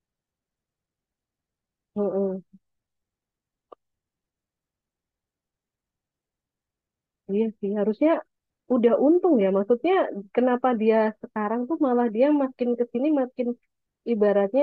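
Nothing in the speech recording stood out as a technical problem on listening.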